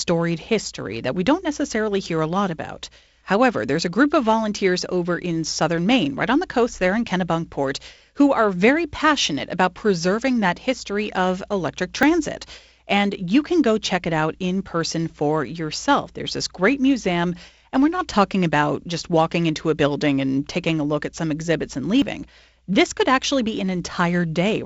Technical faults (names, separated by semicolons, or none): dropped buffer (overrun)